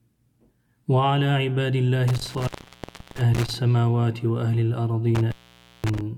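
Around 2.08 to 3.55 s there's an intermittent contact fault: a loose cable or plug opens, the sound drops out for about 0.68 s with crackle at either edge and faint hiss in the gap. It happens again from 5.15 to 6.01 s, open about 0.52 s.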